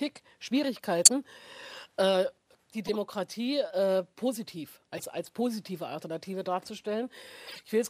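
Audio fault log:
1.05–1.10 s, 2.87–2.96 s, 4.97–5.04 s, 7.47–7.63 s: corrupt frame decoded. Damaged compressed frames were played anyway. Misread gains and codes put energy at wrong frequencies. Each gives a brief chirpy noise burst over three to seven frames. The first peaks around -5 dBFS. Later ones are quieter.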